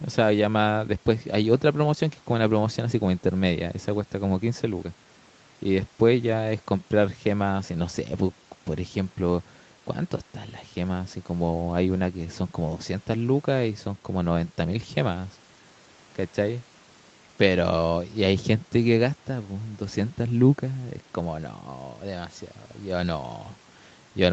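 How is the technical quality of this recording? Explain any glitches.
No glitches can be heard anywhere in the recording. It sounds like a wideband call, with nothing above about 8 kHz, which fits audio that came through an ordinary call path.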